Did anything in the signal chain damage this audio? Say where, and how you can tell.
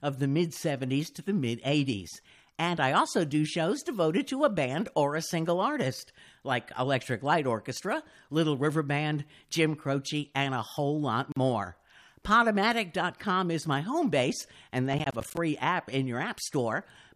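Yes. At the codec stage, separately encoded pieces were joined without trimming the encoder's start-up delay and end-of-file padding, leaving a gap at a join of encoded pieces. At 11.32 s the continuous speech drops into a 44 ms gap and then resumes exactly where it left off. Its edges are smeared by the codec. The lack of any missing material points to a splice rather than a network loss.

At the driver or buffer stage, the processor fell behind and missed a run of audio deadlines, producing processor overload crackle from 14.93 to 15.37 s. Each missed buffer was filled with silence, so the speech is chopped by a rapid string of tiny hard-edged dropouts, heard as gritty tearing. The spacing fits buffers of around 10 ms, with something like fifteen of them lost before the load eased.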